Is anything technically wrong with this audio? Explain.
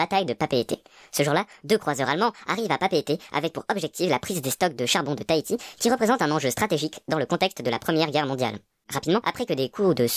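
Yes. Throughout, the speech plays at the wrong sample rate, fitting 22 kHz audio played at 32 kHz unconverted. It is 1.45 times faster and 6.45 semitones higher. A spectrogram shows harmonics shifted upward, and the waveform is squeezed in time.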